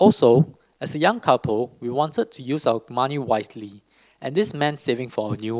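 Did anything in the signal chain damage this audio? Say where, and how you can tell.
No, nothing along the way seems to have left a mark on this one, so there's no stage to point a finger at.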